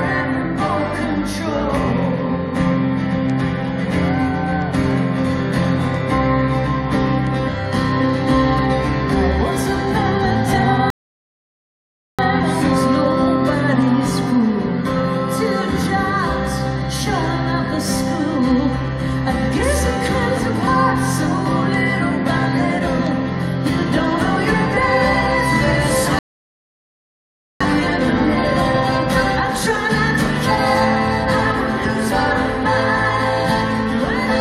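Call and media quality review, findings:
Rebuffering stall, player buffer underrun: playback halts to silence at 10.90–12.19 s and 26.19–27.61 s, then resumes exactly where it stopped. No audio lost, about 1.28 s and 1.42 s added.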